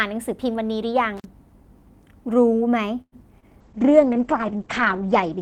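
At 1.17 to 1.25 s an intermittent contact breaks the speech: a loose plug or cable connection opens for about 40 ms, so the signal drops out abruptly with small crackles at both edges where the contact scrapes open and shut. Between them only faint hiss remains. Network faults do not sound like this. The crackle marks it as electrical, and nothing is synthesised to cover the hole.

From 3.01 to 3.14 s there is a call audio freeze. The last sound is stretched into a fading buzz or hiss for roughly half that span, then about 50 ms of silence, before the speech resumes exactly where it stopped. Nothing is lost. Instead about 106 ms of extra delay is inserted, most likely because packets stalled in transit and the jitter buffer ran dry. Unlike a cable fault, there is no crackle, only a synthetic smear and then quiet.

At 3.40 to 3.44 s short concealed packet loss leaves a brief smear. About 20 ms of real audio never reached the decoder, so it was replaced by roughly 23 ms of extrapolated sound, continued from the preceding pitch or noise, then blended back in. 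This differs from the freeze because the gap is far shorter and there is no silence or delay shift. Instead a sliver of the actual speech is simply missing.

From 3.62 s to the end at 5.41 s a call bitrate drop degrades the speech. The coding turns coarse and watery, and the top end is cut off at 8 kHz where before it reached 20 kHz, which fits the encoder falling from around 40 kbps to about 9 kbps. It holds at its worst for roughly 1.4 s. It is a sustained change in tone, not a momentary break, so it stands apart from the dropouts before it.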